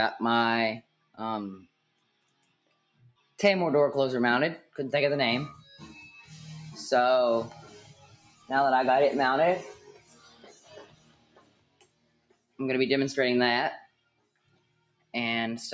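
A speech-tuned noise suppressor runs across the whole clip, treating sustained tones and tails as noise and swinging the level by around 20 dB. Attacks pass while held sound sinks, giving a pumping, fluttering thinness that follows the material rather than fixed timing. The high end stops near 8 kHz from the call microphone processing.

Sound cut by the noise suppressor is heard at 0.82 to 1.19 s, 1.58 to 3.39 s, 7.73 to 8.5 s, 9.75 to 12.59 s and 13.85 to 15.14 s. Drops reach about 17 dB, and about 11 dB at 7.73 s. Unlike a dropout, these are partial dips with attacks still intact.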